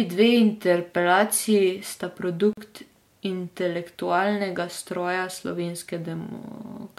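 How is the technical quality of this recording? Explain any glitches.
The recording has one glitch, a short dropout in the speech. From 2.53 to 2.57 s there is a gap at a join of encoded pieces, a hole of about 42 ms. The audio was encoded in separate segments and butted together untrimmed, so the encoder's start-up delay and last-frame padding leave silence at the seam, which fits pieces about 6 s long. It sounds like a brief dropout, with speech resuming where it left off. A waveform shows a flat stretch with slightly softened edges, and a spectrogram shows a thin vertical blank band across all frequencies.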